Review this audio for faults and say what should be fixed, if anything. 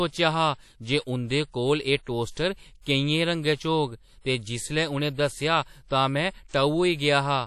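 The whole speech clip carries a ringing, washy texture with hiss that swells and fades with the voice, most likely from WMA compression at a low bitrate, something near 48 kbps. The codec splits the audio into long transform blocks, and where too few bits are available it zeroes weak components and smears quantisation noise across each block. On a spectrogram, nothing appears above 14.4 kHz, and the upper bands look patchy and blotchy instead of smooth. Encoding from the original at a higher bitrate, or with a better codec, would prevent this.

Pre-echo occurs twice: from 2.32 to 2.37 s, just after "कोल एह्", and from 2.81 to 2.86 s. In each case a sharp onset lands late in a transform block. The codec sizes its noise for the loud attack but spreads it over the whole block, so a short hiss fills the quiet gap before the attack. The attacks sound softened and smeared. On a waveform, a low fuzzy ramp about 48 to 50 ms long precedes each attack, and a spectrogram shows a broadband smudge ahead of each onset. 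An encoder with block switching, which shortens its windows around transients, would prevent this.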